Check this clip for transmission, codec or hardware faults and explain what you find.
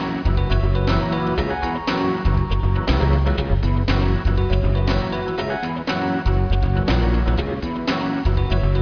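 Nothing stood out on listening to this clip.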